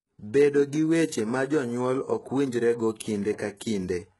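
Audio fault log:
Throughout: HE-AAC compression, heavy. The s sounds are gritty and lispy, the treble is metallic, and nothing remains above 11.5 kHz, likely from lower bands copied upward at a bitrate around 12 kbps.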